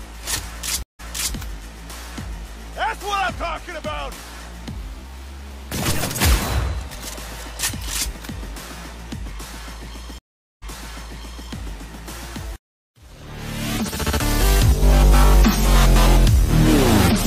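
Stream reconnects occur at 0.83 s and 10.18 s. Each time the connection dropped, the player fell silent, about 164 ms the first time and 433 ms the second, then reconnected and began a fresh decoder mid-stream. Because the server resent a burst of already-played audio, playback resumes earlier than where it stopped, by 348 ms and then 859 ms, so a stretch of sound repeats. The first frame after each gap fades in.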